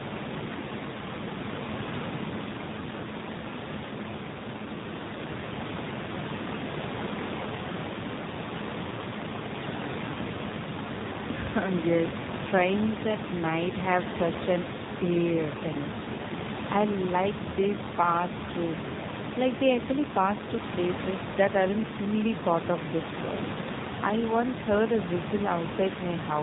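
From start to finish the speech sounds buzzy and synthetic, with nothing above 4 kHz, and the room noise, about 8 dB below the voice, churns into a swirling warble. This is the AMR narrowband mobile codec, modelling the vocal tract from sparse pulses at a low rate, around 7.4 kbps.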